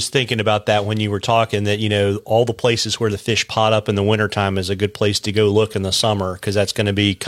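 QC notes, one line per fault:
Nothing to flag here; I went through the speech and didn't hear any technical faults at all.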